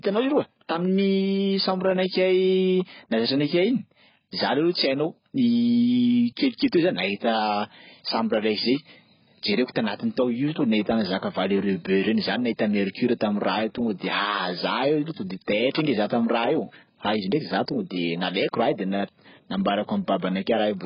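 From start to finish the speech carries heavy AAC compression damage, likely from AAC-LC at a very low bitrate, around 12 kbps. Nothing reaches above 5.1 kHz, so it sounds dull and smeared, with a warbling, fizzy edge that a plain low-pass filter would not add.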